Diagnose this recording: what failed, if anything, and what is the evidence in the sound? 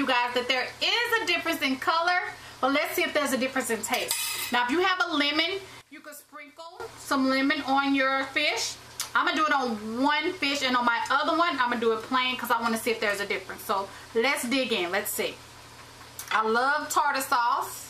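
One channel inverted, from 5.81 to 6.80 s: for just under a second the sound drops by about 18 dB and turns faint and distant, as if its centre has been hollowed out, then returns at full level. The likely cause is a polarity flip on one side of the stereo pair at the analogue wiring stage, so when the two channels are summed to mono their shared content cancels and only the faint difference between them remains.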